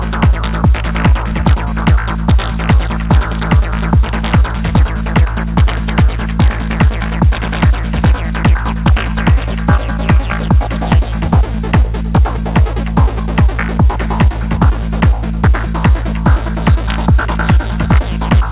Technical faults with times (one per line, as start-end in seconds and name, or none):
none